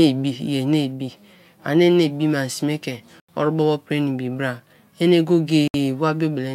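Bluetooth dropouts at 3.20 s and 5.68 s (just after "bra ene") silence this speech clip for 85 ms and 64 ms. Each gap has abrupt or briefly faded edges, and the speech resumes further on as if it had kept playing, likely because wireless packets arrived late and were discarded.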